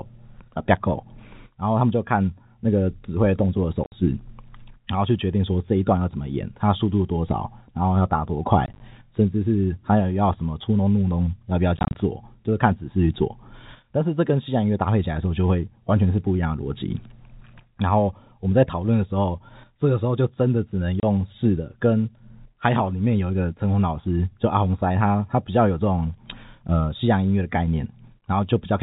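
Speech over a G.711 telephone line with packet loss filled with silence at 3.84–3.92, 8.66–8.8, 11.77–11.95 and 21.0–21.03 s. Dropped packets, which fit 10 ms packets, leave silent gaps with hard edges, seen as blank vertical slices on a spectrogram.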